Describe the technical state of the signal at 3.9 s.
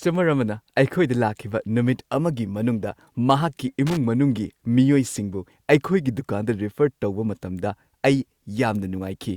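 At 3.87 to 3.97 s, just after "ꯅꯨꯃꯤꯠ ꯑꯃꯒꯤ ꯃꯅꯨꯡꯗ ꯃꯍꯥꯛꯀꯤ", the speech is broken by loose connector crackle lasting about 0.1 s. A worn or dirty contact is rapidly opening and closing, chopping the signal. The result is an irregular, scratchy burst. A single digital click or a clean dropout would give one sharp edge or a tidy gap instead.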